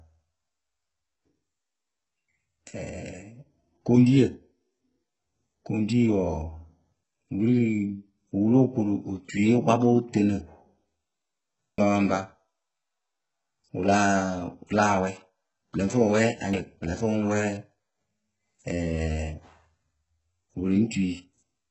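Throughout the speech, HE-AAC compression is the likely cause of heavy codec damage. Nothing is present above 8 kHz, and the treble that remains is rebuilt from copied lower bands rather than the original, so s sounds come out gritty and lispy, consistent with a very low bitrate around 8 kbps. Audio missing between chunks occurs at 11.78 s and 16.53 s. Each time, roughly a third of a second vanishes and the surrounding sound is butted together with no silence, giving an abrupt skip where processing in 5-second blocks likely dropped material at the joins.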